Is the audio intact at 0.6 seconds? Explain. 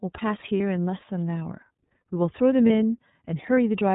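No. From 0.57 to 0.60 s there are lost iLBC frames, a gap the length of a single 30 ms frame. The decoder filled it by repeating the last pitch cycle mixed with noise, so it sounds like a brief held, slightly buzzy vowel. On a spectrogram this shows as a short stretch of flat, repeated harmonics with a haze of noise between them. The waveform shows near-identical repeating periods, and normal detail returns right after 0.60 s.

The moment also carries the iLBC codec heard across the whole clip. Its plainly audible damage gives the speech a rough, slightly synthetic edge, and its narrowband limit removes everything above 4 kHz. A spectrogram shows a hard ceiling at 4 kHz with nothing above it, and the frame timing points to iLBC's 30 ms mode.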